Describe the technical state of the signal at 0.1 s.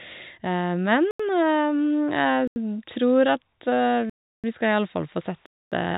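At 0.1 s the speech is intact, with no fault present, only the narrow telephone band of G.711 coding that leaves nothing above about 3.8 kHz.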